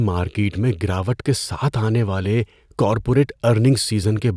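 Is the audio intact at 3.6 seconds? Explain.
Yes, the speech at 3.6 seconds plays through intact, with no dropout, click, distortion or other fault at that moment.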